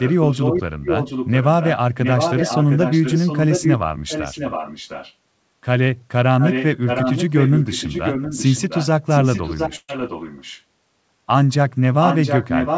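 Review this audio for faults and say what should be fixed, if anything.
Echo leak at 0.0–0.62, 0.83–1.76, 2.03–3.74, 4.08–5.14, 6.4–6.65, 6.86–8.87, 9.09–10.62 and 12.01–12.77 s. A copy of the speech trails 710 ms behind, at about 5 dB below it (about 10 dB below at 4.08–5.14 s). The likely cause is a far-end loudspeaker whose echo canceller let residual pickup through. Fix it by enabling or retuning acoustic echo cancellation at the far end, or by using a headset there.

Burst of packet loss at 9.76–9.99 s. About 125 ms of concealment stretches the last sound into a fading tail, then 30 ms of silence follows, and about 120 ms of audio is skipped before playback resumes. Prevent it by improving network stability or enabling forward error correction and a larger jitter buffer.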